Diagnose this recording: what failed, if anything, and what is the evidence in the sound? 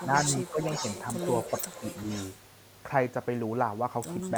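A delayed copy of the talker trails the speech from 0.0 to 2.34 s, arriving 385 ms late at roughly 10 dB below the direct voice. This is echo leak in call processing: the far end's echo canceller likely let some loudspeaker pickup through, which was sent back.

The speech dips briefly at 0.0 to 0.05 s and 0.79 to 0.84 s (about 5 dB each), at 0.51 to 0.61 s (about 10 dB), and deepest at 1.61 to 1.84 s (about 20 dB). This is speech suppressed in double talk: the echo canceller likely attenuated the talker while treating overlapping signal as echo.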